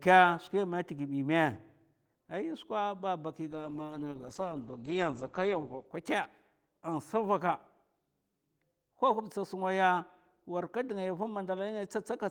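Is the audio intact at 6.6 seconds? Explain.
Yes, the speech at 6.6 seconds is intact, with no dropout, click, distortion or other fault at that moment.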